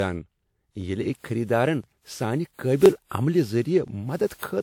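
From start to end, the speech carries generation loss. It sounds swirly and hollow, with smeared detail and softened attacks. This is more damage than a single lossy encode at this quality would leave. The likely cause is repeated decoding and re-encoding, roughly five times. The sound fits a WMA chain at about 96 kbit/s. Each pass quantised on a shifted frame grid, so noise and spectral gaps piled up. Content still reaches about 20.1 kHz.

Overlapping chunks appear at 1.84 s, 2.86 s and 3.88 s. Each join is a short stutter or click. About 21.33 ms of audio plays twice at each one. The joins fall one second apart, which points to one-second processing chunks. Each new chunk began slightly before the previous one ended. That overlap was not removed, so the repeated slice is audible.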